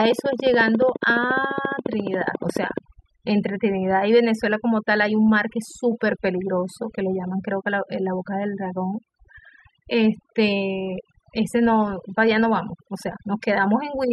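From 0.05 s to 2.79 s a train of clicks runs over the speech: sharp, near-identical ticks at a steady 14.3 per second, about forty in all, peaking roughly 15 dB above the speech and persisting through pauses. The even spacing points to a likely cause in electrical interference from nearby equipment or a faulty connection or power supply. A waveform shows a picket fence of narrow spikes, and a spectrogram shows evenly spaced thin vertical lines spanning the full frequency range.

Throughout the whole clip there is overdone noise removal. The reduction was set so aggressively that individual frequency bands near the noise estimate are pulled down or switched off, and quieter parts of the speech are removed along with the noise. Pauses fall to near silence dotted with twinkling specks. On a spectrogram the background becomes dark with scattered isolated dots, and speech harmonics look ragged and broken into patches.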